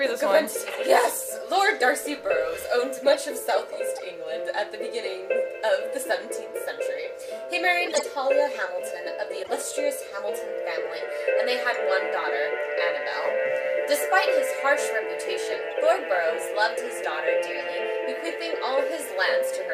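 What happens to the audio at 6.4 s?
Nothing goes wrong at 6.4 s; the audio runs through that moment intact, with no dropout, click or distortion.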